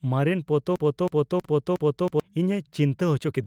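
A stalled decoder or stream is the likely cause of the broken-record loop that runs from 0.76 to 2.20 s in this short speech clip. The receiving end stopped getting fresh audio and kept replaying the last fragment it held, so a 320 ms slice of speech repeats exactly, back to back, six times. For almost a second and a half the talker seems stuck on the same sound, and whatever should have been spoken during that stretch never arrives. Inside that window, at 1.45 to 1.47 s, comes a skip ahead. Later audio was already queued, and a block of roughly 0.7 s was thrown away, probably by an overfull jitter buffer. Playback jumps straight across the missing stretch with no filler or silence, cutting the delay by about the same amount, so the two sides of the cut butt together abruptly. From 3.19 to 3.43 s there is a jitter buffer speed-up. The buffer was still holding more audio than its target, so the receiver trimmed out a few tens of milliseconds in small pitch-period-sized pieces. 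Speech runs at about 114% of normal rate while keeping its pitch, giving the last moments a rushed quality.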